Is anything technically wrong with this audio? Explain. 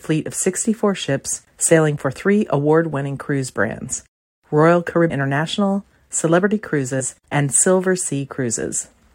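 Yes. There are compressed frames skipped, at 5.09 s and 7.0 s. At each point the speech jumps forward. Whole blocks of encoded audio were never played, either lost from the file or rejected by the decoder as damaged. The frame length here is 23.2 ms. The first jump loses roughly ten frames, about 200 ms. The second loses about three, around 70 ms.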